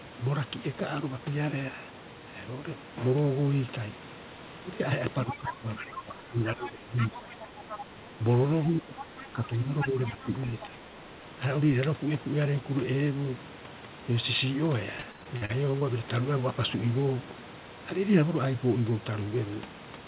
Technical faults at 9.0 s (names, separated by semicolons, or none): speech suppressed in double talk; other side's voice leaking through